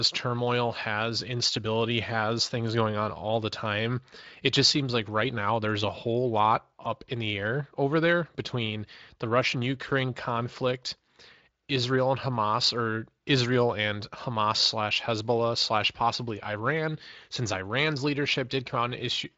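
No technical faults can be heard in this speech.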